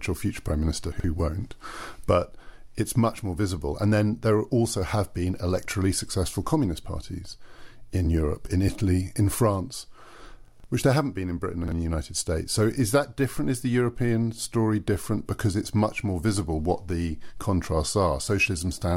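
Chunks out of order at 0.92–1.04 s, 10.48–10.64 s (just before "which there haven't been") and 11.64–11.72 s. A 40 ms chunk arrives late, playing two, three and then one chunk after its proper place, so the speech briefly jumbles at each hard join.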